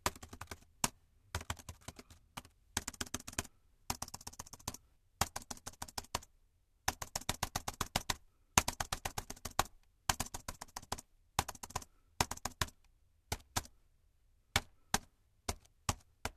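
No technical faults can be heard anywhere in the audio.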